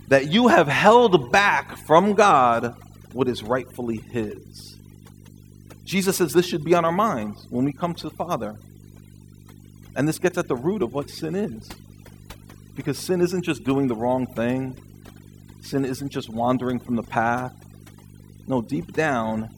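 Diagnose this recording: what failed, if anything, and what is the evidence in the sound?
Video or display buzz in the analogue wiring: a 50 Hz field-rate buzz with hash and a 15.6 kHz line tone sit roughly 15 dB below the speech throughout.

Overdone noise removal at the processing stage: throughout, bands near the noise estimate are cut hard, leaving twinkling, warbling specks in the background.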